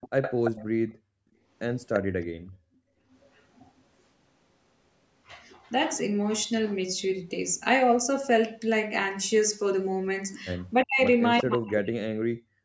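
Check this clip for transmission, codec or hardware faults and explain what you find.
The clip is speech and shows three echo-canceller faults: leaking echo early and once near the end, gated background in the first few seconds, and the talker being cut down near the end.

Echo leak, at 0.01–0.65 s, 1.93–1.99 s, 3.11–3.42 s and 11.38–11.42 s: a copy of the speech trails 345 ms behind, about 10 dB down at first, around 15 dB down late, and barely audible at 3.11 s. Likely cause: loudspeaker sound escaping the far end's echo canceller and returning.

Background gated by the echo canceller, at 0.85–1.47 s and 2.28–3.07 s: the room sound abruptly sinks, by about 34 dB and about 33 dB, for roughly half a second and then most of a second. It recovers when the canceller stops clamping the microphone while the loudspeaker plays.

Speech suppressed in double talk, at 10.84–11.0 s and from 11.42 s to the end: the talker's voice dips sharply, by roughly 40 dB, in chunks totalling about a second. 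The likely cause is the canceller muting the talker while both sides spoke at once. The missing content above 8 kHz reflects ordinary call processing.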